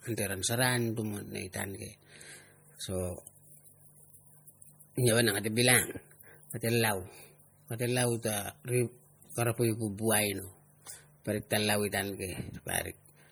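From start to finish the speech carries plainly audible MP3 compression, likely from a low-bitrate encode, something like 48 kbps. Weak frequency lines drop in and out between frames, giving a watery, swirly texture and metallic chirps on s sounds, and there's nothing above 21 kHz.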